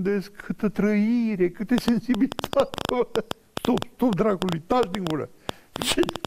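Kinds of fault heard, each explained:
Train of clicks: From 1.78 s to the end at 6.26 s, irregular ticking and popping, about 7.6 clicks per second and some forty in all, stands well above the sound, even in gaps; likely interference from nearby equipment or a faulty connection or power supply.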